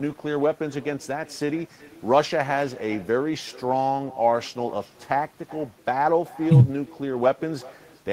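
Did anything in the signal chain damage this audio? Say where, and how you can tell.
Yes: echo with no canceller, at the call-processing stage, throughout. Every phrase returns about 20 dB quieter, roughly 0.4 s later and thinner. A far-end loudspeaker feeds its microphone unremoved. A spectrogram shows faint delayed copies trailing each syllable, and the waveform shows small ghost bursts.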